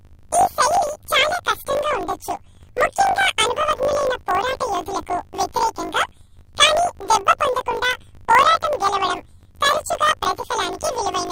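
Throughout, the speech carries a robotic buzz at 50 Hz: planar audio read as interleaved, so each 20 ms block plays twice at double speed, left then right.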